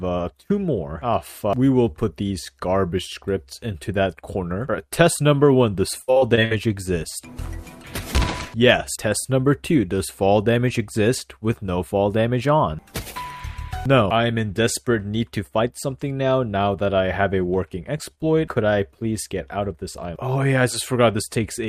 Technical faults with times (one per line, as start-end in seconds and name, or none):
6.01-6.52 repeated packet loss (robotic sound)
17.98-18.19 short concealed packet loss